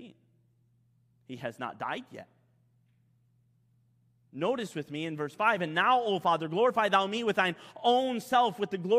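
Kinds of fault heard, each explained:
No technical fault can be heard anywhere in this speech recording. There is nothing to list under any kind of fault.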